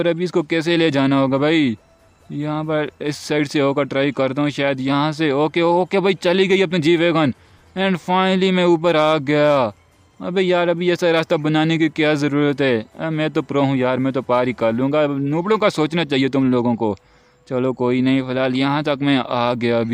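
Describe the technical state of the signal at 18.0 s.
At 18.0 s the signal is intact, with no audible technical fault at that moment.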